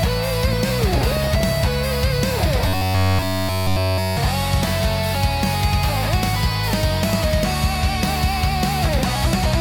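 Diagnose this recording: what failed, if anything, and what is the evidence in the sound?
DAB burbling sits in the codec and reception stage, from 0.53 to 1.41 s. Short noise blips and level jumps in single sub-bands ride over the sound. Bit errors, under half a percent, slip past error correction into the MP2 data. Corrupted samples put noise blips in single sub-bands, and corrupted scale factors make sub-bands jump in level for up to a frame.

Robotic sound from repeated short buffers appears from 2.68 to 4.17 s. The sound turns into a rigid metallic buzz at 93.8 Hz. The likely cause is a driver or buffer underrun. Playback repeats a slice of about 10.7 ms in place of new audio, all of the time. That repetition imposes the fixed pitch.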